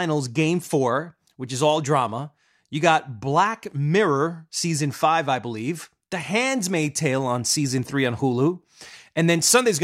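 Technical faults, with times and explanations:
6.80–9.83 s, sample clock jitter: the sampling clock wanders by around two microseconds, and the error, roughly 30 dB below the speech, scales with waveform slope, so hiss rises on loud, bright syllables and vanishes in pauses; a spectrogram shows broadband noise only under speech.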